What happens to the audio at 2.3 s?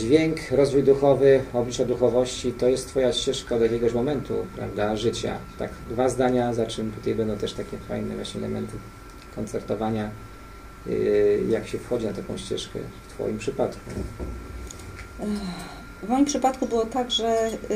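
Nothing goes wrong at 2.3 s; the audio plays through that moment intact, with no dropout, click or other fault.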